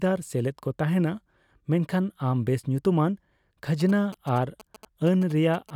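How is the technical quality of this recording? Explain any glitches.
The recording carries one glitch: GSM signalling bursts from 3.8 s to 5.7 s. A nearby 2G phone sent short groups of radio bursts that the audio circuit rectified, producing a galloping dit-dit-dit of short 217 Hz buzzes sitting roughly 20 dB beneath the speech.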